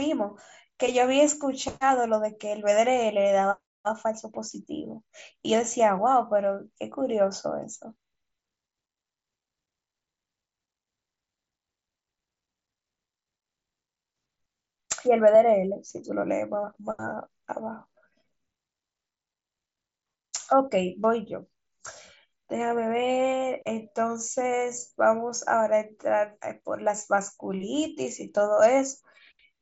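No technical faults can be heard in this speech recording.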